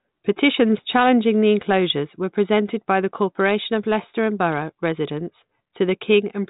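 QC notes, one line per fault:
No faults are heard in this speech. The G.726 ADPCM path at 40 kbit/s is audible only as a band limit near 3.8 kHz and, at most, a faint trace of the coder.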